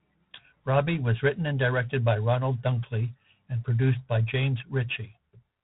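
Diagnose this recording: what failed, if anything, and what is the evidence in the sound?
At the codec stage, G.726 ADPCM coding, coarse enough to fit 24 kbit/s, leaves a rasping, level-following hiss throughout and nothing above 3.9 kHz.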